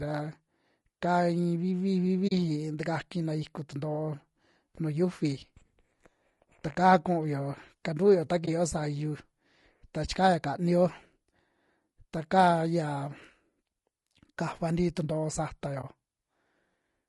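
Throughout the speech, the encoding was likely done with low-delay AAC compression of the AAC-ELD kind used for video calls, at a rate that fits roughly 32 kbps. Its short frames split the voice's harmonics coarsely and leave few bits to spend, so the damage is plainly audible: the voice sounds rough and grainy, with noise filling the gaps between harmonics and a top band that sounds thinned and synthetic.

At 2.27 to 2.32 s, 8.45 to 8.48 s and 15.81 to 15.84 s, AAC frame loss with muting occurs. Data went missing and the decoder filled the gaps with silence. Because AAC frames overlap, each gap fades out and back in rather than cutting abruptly. The first is a hole of about 40 ms, which fits two lost frames. The later two last about 20 ms each, consistent with single frames. All three sound like brief soft-edged dropouts.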